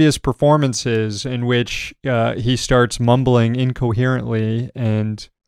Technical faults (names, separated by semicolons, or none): none